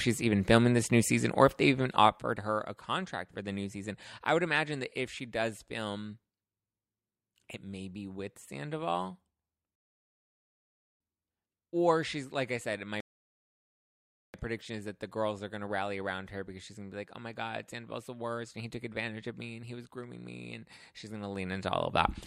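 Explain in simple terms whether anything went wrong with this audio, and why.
Two rebuffering stalls interrupt the speech, from 9.75 to 11.00 s and from 13.00 to 14.34 s. Each time, the player ran out of downloaded audio and went silent until more arrived, then resumed exactly where it stopped. Nothing is missing, but each stall adds about 1.3 s of dead air.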